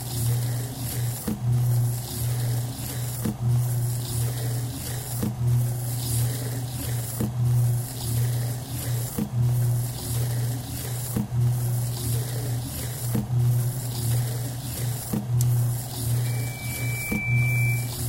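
Everyday sounds, until a piercing 2.3 kHz tone rises from 16.24 s, swells for about a second and rides above them to 18.02 s. This is loudspeaker feedback squeal, where a microphone re-amplifies its own loudspeaker at that frequency.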